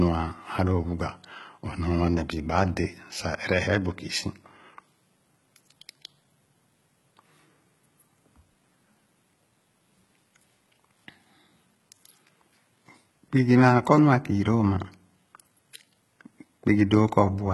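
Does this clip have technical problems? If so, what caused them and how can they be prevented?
Yes. HE-AAC compression runs through the whole speech clip, and the sound points to a very low bitrate, around 16 kbps. The damage is heavy: nothing reaches above 11.8 kHz, and the treble is not the original but lower bands copied upward and shaped by a coarse envelope, so its harmonics fail to line up and s sounds come out gritty and metallic. This is likely from encoding as HE-AAC v2. Encoding at a higher bitrate, or with plain AAC, would prevent it.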